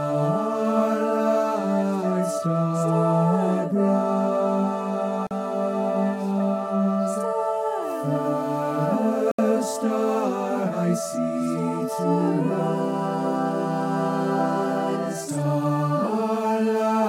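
At 5.27 s the sound cuts to dead silence for about 41 ms, and again at 9.31 s for about 71 ms, before carrying on. These are likely Bluetooth stalls, where radio interference delayed packets until the headphones' buffer emptied. What separates them from a click or a codec glitch is the clean gap: there is no burst of noise, warble or smeared repetition, just an abrupt stop and resumption.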